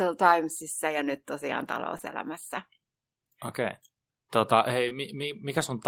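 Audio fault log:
1.97–2.05 s, short concealed packet loss: just after "ja nyt tosiaan", two back-to-back brief smears. Two 20 ms chunks arrived too late, and the decoder stretched the preceding sound to bridge each gap.
4.89–4.93 s, short concealed packet loss: one wobble. About 20 ms of audio went missing, and the receiver filled it by continuing the previous sound before blending back in.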